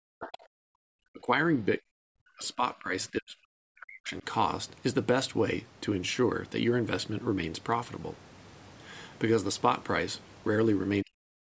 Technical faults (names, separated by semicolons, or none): speech suppressed in double talk